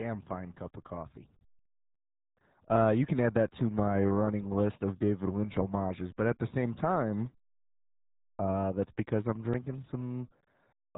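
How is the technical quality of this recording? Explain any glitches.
The technical quality is poor throughout, due to a single fault: heavy RealAudio 14.4 codec damage. From start to finish, nothing above 3.8 kHz survives, which fits a RealAudio 1 encode at about 8 kbit/s. So few bits force a crude model of the speech, leaving it muffled and gargly. Plain telephone band-limiting would sound dull but clean; this gurgling, watery smearing marks a starved low-bitrate codec.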